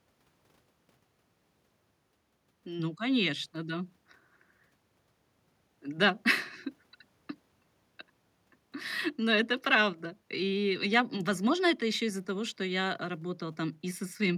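No technical faults can be heard anywhere in the speech recording; the signal stays continuous and stable throughout.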